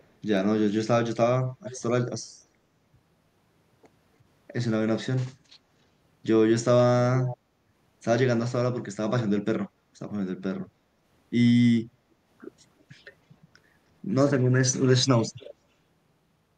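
Brief scraps of echo leak appear at 0.00–0.04 s, 1.64–1.80 s, 7.21–7.37 s and 15.40–15.54 s: a delayed copy of the speech arriving about 300 ms after the original, very faint at first and louder near 7.2 s. The likely cause is a far-end echo canceller letting part of its loudspeaker pickup return. Unlike room reverberation, which smears sound into a decaying tail, this is a distinct, repeated copy at a fixed lag.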